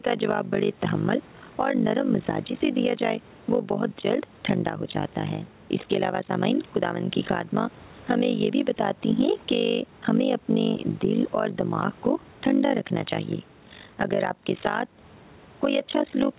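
Overlap-add ripple runs throughout. Frames rejoin with uneven gain, so the level dips about 60 dB around fifty times a second. It sounds like a fast flutter.

Gain pumping is also constant. The gain swings around 10 dB. Excess gain into a fast limiter is the likely cause.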